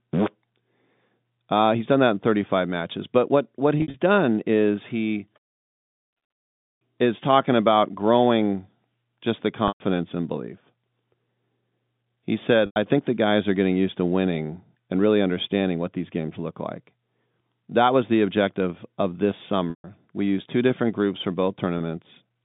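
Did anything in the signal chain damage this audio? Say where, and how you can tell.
Yes, at the network stage. Packet loss with pitch repetition occurs at 3.78–3.94, 9.68–9.80, 12.66–12.76, 19.70–19.84 and 21.78–21.80 s. Short gaps sound like a briefly held, buzzy tone, while longer ones fade into silence. The receiver replays the last pitch period across lost 20 ms packets, for 20 to 140 ms.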